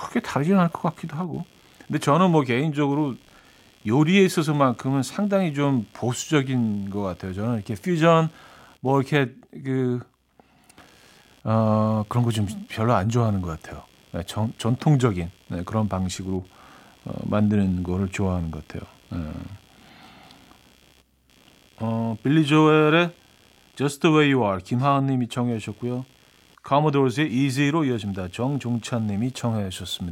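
Computer activity noise runs from start to finish: a faint buzzing ticking at around 70 pulses a second, roughly 35 dB below the speech. Processor or peripheral load is disturbing the shared ground of the audio circuit, so it follows the computer's activity, not the speech.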